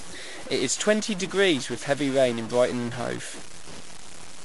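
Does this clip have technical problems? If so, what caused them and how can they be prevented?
Yes. A stuck bit, likely a data line or converter bit frozen at one value, runs throughout the speech. It offsets about half the samples, giving distortion, and even the pauses fill with noise. Checking the wiring and converter, and testing with a sine wave, prevents this.

MP3 compression is also present across the whole clip, likely from encoding at a bitrate around 48 kbps. Nothing remains above 11.3 kHz, weak frequency lines flicker on and off into a watery swirl, and consonant attacks smear. Encoding at a higher bitrate or with a lossless format prevents this.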